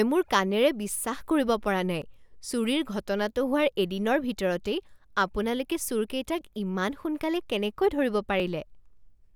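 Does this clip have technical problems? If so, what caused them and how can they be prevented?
Yes. There are two brief jumps in the speech, at 2.02 s and 8.40 s, where the sound skips ahead by roughly 4 ms and then by a millisecond or two. These are likely dropped buffers (overrun). The program didn't collect its samples before the hardware overwrote them, so the two sides are spliced together with no silence. A waveform shows a sudden step with no gap, and a spectrogram shows a thin vertical broadband line. To prevent this, use larger buffers or give the capture thread higher priority so it keeps up with the hardware.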